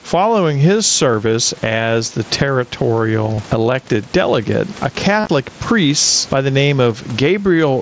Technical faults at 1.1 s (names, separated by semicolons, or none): gain pumping; concealed Bluetooth headset packet loss